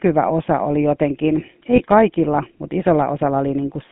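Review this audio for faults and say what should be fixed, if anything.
The whole speech clip carries the sound of the GSM full-rate codec. This coder builds a simple model of the vocal tract and feeds it a sparse train of pulses. Much fine detail of the excitation is discarded. The result here is a plainly audible buzzy, gravelly roughness on the voice. The band runs from about 150 Hz to 3.5 kHz, with nothing above that. The character fits a 13 kbps full-rate stream. Prevention: carry the call over a wideband codec such as AMR-WB or Opus instead of GSM full rate.

Lost GSM frames appear between 1.76 and 1.82 s, after "osa oli jotenkin" and before "kaikilla mutta". A damaged frame was replaced by repeating the last good frame's settings. This holds the sound briefly as a rough, metallic ring. The disturbance is short and does not fade to silence. It fits a single lost 20 ms frame. Prevention: improve radio coverage or add stronger channel protection so fewer frames arrive corrupted.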